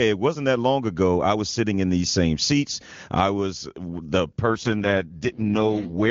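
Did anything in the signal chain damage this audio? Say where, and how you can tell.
Yes. At the network and codec stage, after "seats I was the", an AMR rate drop at 4.46 s lasts to the end at 6.1 s. The speech turns rough and synthetic without a bandwidth change or gap, which fits AMR-WB stepping down from the clean 23.85 kbit/s mode to 6.6 kbit/s to free bits for error protection on a weak radio link.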